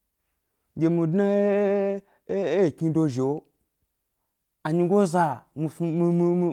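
Listening to the whole recording, nothing in the sound stood out as a technical problem at any point.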